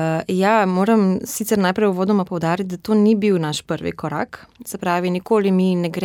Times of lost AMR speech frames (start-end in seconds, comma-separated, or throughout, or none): none